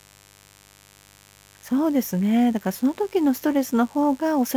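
Mains buzz runs under the speech from start to finish. Switching spikes at twice the 50 Hz mains rate add raspy harmonics, roughly 30 dB below the speech.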